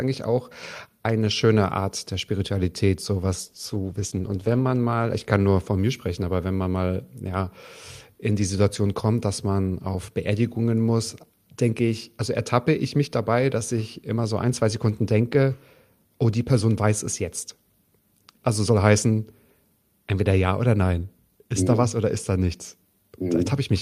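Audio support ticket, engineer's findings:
Call bitrate drop, 3.4 to 5.91 s. Speech goes rough and muffled, worst for about 1.2 s. Bandwidth estimate fell and the Opus encoder coded coarsely and cut the highs, fitting a 48 to 15 kbps drop. Spectrogram: upper band darkens, smeared texture.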